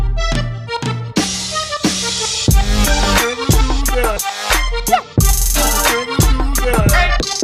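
Nothing here stands out as a technical fault; the audio runs along without any dropouts, glitches or other problems worth pointing to.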